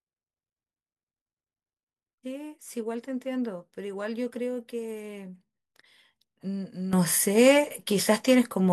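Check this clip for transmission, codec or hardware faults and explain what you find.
One fault is present. At 6.93 s a sudden gain jump raises speech and background noise together by about 12 dB until the end, likely an unramped digital gain change.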